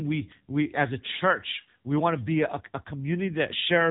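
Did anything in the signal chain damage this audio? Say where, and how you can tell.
Yes. The damage comes from the codec stage: the speech has passed through the AMR narrowband mobile codec (AMR-NB) for the whole clip. Nothing above about 3.8 kHz survives, so the sound is muffled and telephone-thin. The codec artefacts are heavy, with a buzzy, synthetic quality that fits one of the codec's low bitrates, around 6.7 kbps. The codec rebuilds the voice from a compact vocal-tract model excited by a few pulses per short subframe, which discards the natural texture.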